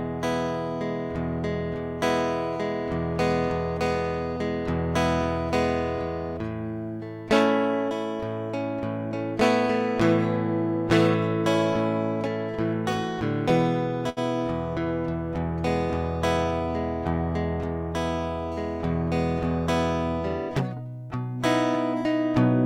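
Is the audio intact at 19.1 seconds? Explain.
Yes, the music plays through cleanly at 19.1 seconds, with no dropout, click or distortion there.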